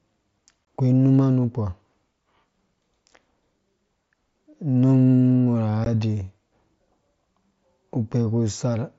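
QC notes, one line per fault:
0.65–0.67 s and 5.85 s: unconcealed Bluetooth headset packet loss. Headset packets went missing and nothing patched them, leaving abrupt gaps of about 22 ms and 15 ms.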